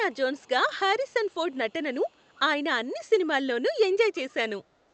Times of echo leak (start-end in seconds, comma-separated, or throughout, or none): 0.12-0.48, 1.07-2.39, 4.15-4.34